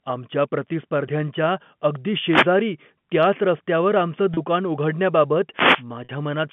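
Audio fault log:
2.17–2.55 s and 5.54–5.84 s: wireless microphone noise hit. The FM radio link fades as reflections cancel, so receiver noise surges into a brief swish of static.
4.34 s and 6.04–6.09 s: packet loss with pitch repetition. About 30 ms and 50 ms of audio went missing. The receiver repeated the last pitch period, giving a short, buzzy held tone.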